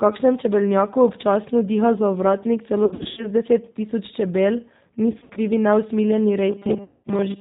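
Throughout, the speech carries G.729 codec damage at 8 kbit/s: nothing above 4 kHz, with a plainly rough, synthetic texture from the pulse-based frame rebuilding.

From 2.85 to 3.28 s and again from 5.12 to 5.39 s, VoIP packet loss concealed by the speech codec turns the sound buzzy and fading. About 200 ms and 140 ms went missing, in runs of up to 80 ms. The decoder extrapolated its last pitch and filter, and the speech stays weak briefly afterward.

From 6.50 s to the end, the speech becomes robotic, with a rigid 200 Hz metallic buzz over most of that stretch. This is likely from repeated short buffers of about 5 ms standing in for skipped audio. Within it, a further 200 ms packet-loss gap at 6.84 to 7.04 s adds another concealed, fading section.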